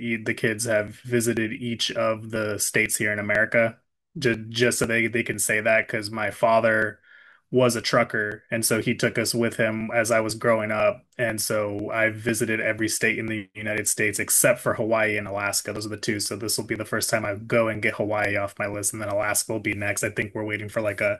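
From 0.38 s to 20.72 s, the speech carries periodic USB or driver dropouts. Every 0.50 s, a few milliseconds of audio are skipped outright. A blocked bus or driver stalls the stream each time. The result is a steady, regular tick that sounds only while the speaker is talking.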